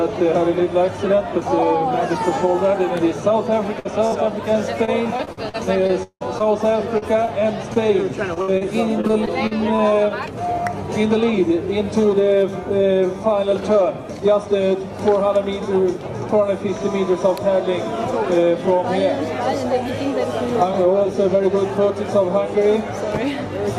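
Two separate bursts of packet loss come first, at 3.79 to 3.87 s and 4.07 to 4.26 s. In each, a run of consecutive packets went missing, about 60 ms and 40 ms of audio respectively. The receiver extended the last sound for roughly 50 ms and faded it, then jumped ahead. Each is a single held-and-fading patch followed by a resumption further on, not a chain of them.

Repeated packet loss (robotic sound) follows from 4.85 to 9.80 s. Here 20 gaps arrive in quick succession, the longest 177 ms, and about 0.7 s of audio is lost in total. Concealment covers about 13% of that stretch, so the patches recur before the sound can settle. The result is a choppy texture with pieces missing rather than the isolated dropouts heard earlier.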